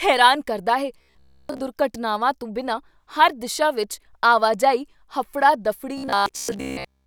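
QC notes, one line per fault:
0.98–1.61 s and 5.98–7.06 s, robotic sound from repeated short buffers: right after "ਹੈਰਾਨ ਕਰਦਾ ਹੈ" and again after "ਆਵਾਜਾਈ ਹਫੜਾ", the speech turns into a stiff metallic buzz at about 67 Hz that only loosely follows the words. The likely cause is audio arriving too rarely, with playback looping roughly the last 15 ms to fill the gaps. Most of the sound in these stretches is repetition, and the real audio in between is lost.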